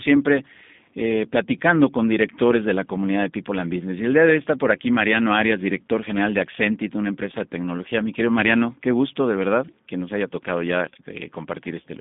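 Throughout the speech, G.729 codec damage is plainly audible: rebuilt from a vocal-tract filter and sparse pulses at what fits 8 kbit/s, it sounds rough and synthetic. On a spectrogram, energy stops near 3.6 kHz and below 150 Hz, with blurred harmonics.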